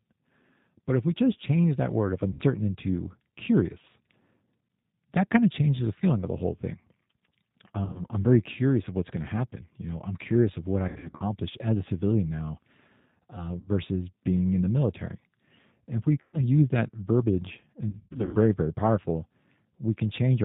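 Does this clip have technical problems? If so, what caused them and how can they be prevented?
Yes. The whole speech clip goes through G.729 at 8 kbit/s, so nothing above 4 kHz survives and the voice sounds plainly rough and synthetic. Running the call on a wideband codec like Opus would avoid it.

There's also VoIP packet loss concealed by the speech codec at 2.33, 7.85, 10.88 to 11.24, 13.6, 16.21 and 17.89 to 18.37 s. Each gap runs 60 to 300 ms, and the decoder stretches the last sound into a fading buzz or coloured noise. A steadier network or a jitter buffer with forward error correction would cut this down.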